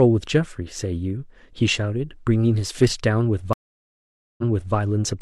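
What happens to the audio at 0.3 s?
Nothing goes wrong at 0.3 s; the speech plays through that moment intact, with no dropout, click, distortion or other audible fault.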